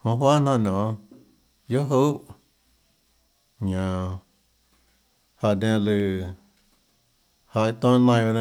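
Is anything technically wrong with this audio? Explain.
Yes. There are dropped samples at 1.19, 2.09 and 6.00 s, heard as three isolated sharp clicks. Each is likely a tiny gap of a fraction of a millisecond where the speech waveform jumps abruptly to a later value, too brief to remove any sound.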